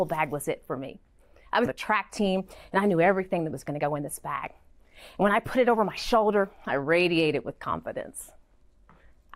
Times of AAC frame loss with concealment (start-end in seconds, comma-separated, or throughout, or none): none